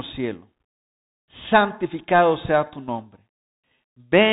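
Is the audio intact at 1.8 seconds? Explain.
No. At 1.8 seconds the speech carries Bluetooth CVSD headset codec damage, which runs through the whole clip. Each sample is coded as a single up-or-down bit with an adapting step. Nothing passes above 4 kHz. Loud high sounds distort, s sounds turn scratchy, and granular hiss sits underneath.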